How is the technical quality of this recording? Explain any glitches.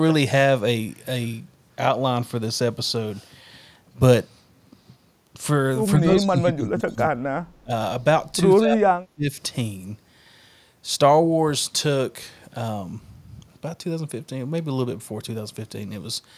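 The recording has two double-talk problems in a speech call, plus a brief echo.

Speech suppressed in double talk, 5.97–7.71 s and 8.59–9.29 s: with both sides likely talking at once, the echo canceller couldn't separate the voice from loudspeaker echo and turned both down. The voice dips by up to about 25 dB, then up to about 40 dB.

Echo leak, 6.97–7.03 s: the far end's canceller likely let part of its loudspeaker pickup through. A faint copy of the voice returns about 180 ms late, about 30 dB below the speech, as a short scrap.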